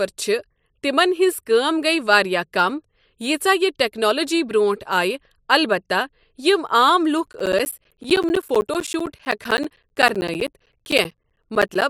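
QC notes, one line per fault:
7.27–11.82 s, periodic USB or driver dropouts: something keeps stalling the audio path every 64 ms, and each time around 10 ms of speech gets blanked to silence. That's about seventy evenly spaced ticks, and they only show up while there's signal.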